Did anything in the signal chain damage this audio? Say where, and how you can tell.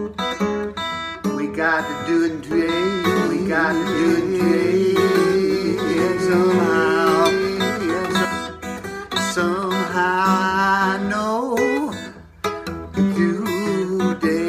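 Yes, there's a doubled audio track from 2.51 to 8.25 s. A second full-band copy trails the original by about two seconds at roughly equal level, with no decay or room colour, and cuts in and out abruptly. Likely a second, slower capture path or a misaligned edit.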